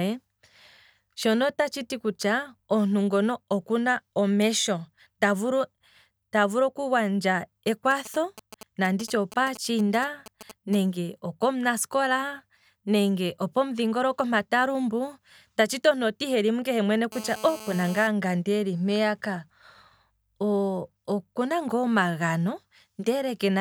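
From 7.68 to 10.75 s, GSM signalling bursts cut into the speech, ending just before "okomunasikola nenge opomudhingoloko mpa". A 2G phone nearby is signalling to the network, sending short groups of radio bursts. The audio circuit rectifies these pulses into sound. The result is a galloping dit-dit-dit of brief buzzes at about 217 Hz. They sit roughly 15 dB below the speech.

From 17.12 to 18.07 s, a GSM phone buzz appears. Here the phone is in a call and transmits steadily, 217 bursts per second. The circuitry demodulates each burst, producing a hard, raspy buzz at 217 Hz. It is rich in harmonics and has no relation to the speech. It holds steady for just under a second, at about 16 dB below the speech.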